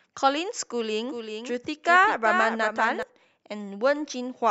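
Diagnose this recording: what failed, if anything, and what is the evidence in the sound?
From 1.09 s to 3.03 s the speech is shadowed by a second, dry, full-band copy trailing about 400 ms behind and about 5 dB quieter, appearing and vanishing abruptly. This doubled audio track likely comes from a routing or buffer stage capturing the signal twice.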